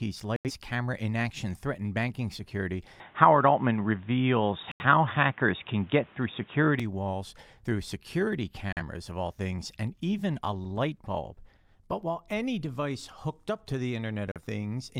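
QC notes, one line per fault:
0.36–0.51 s, 4.72–4.85 s, 8.73–8.82 s and 14.32–14.42 s, digital broadcast dropout: the receiver stopped getting usable frames and muted until clean data returned. The sound drops to silence and picks up again, with the content lost. The first two holes last about 85 ms, which fits two lost frames. The third falls between "walls through security" and "of all things and", and the fourth comes right after "hooked up to the". Those two last about 43 ms each, consistent with a single lost frame.
3.0–6.8 s, input switched to a poorer device: the input most likely moved to a lower-grade microphone or headset path and then back. While it is active, nothing above 3.8 kHz gets through, so the sound turns dull and boxy. New background noise sits some 35 dB below the signal, and the level shifts by a few dB. There is no gap at the switch. Full bandwidth returns just before "walls through security".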